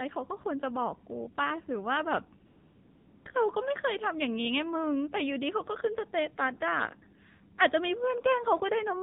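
From the start, the speech is coded with the AMR narrowband mobile codec. Sampling at 8 kHz leaves nothing above 4 kHz, and the buzzy, synthetic timbre fits a low rate near 7.4 kbps. A spectrogram shows a hard ceiling at 4 kHz across the whole clip.

At 2.46 s, AMR comfort noise takes over for 0.8 s, until 3.26 s. No speech frames arrived, so the receiver filled the gap with a smooth, steady synthetic hiss. The waveform shows an unnaturally even low floor with abrupt edges, and the spectrogram shows a uniform band.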